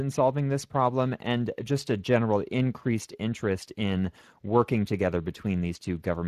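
From the first moment to the end, the speech carries plainly audible Speex codec damage. The CELP model is short of bits for the excitation, so the voice turns grainy and hoarse, a character that fits a mid setting around 22 kbps. Unlike MP3 or AAC artefacts, there is no swirling, metallic smearing across the spectrum. The harm sits in the rough, noisy excitation of the voice itself.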